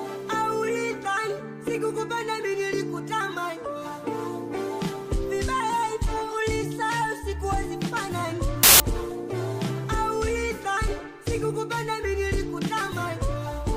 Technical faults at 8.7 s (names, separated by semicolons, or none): samples built from the wrong bytes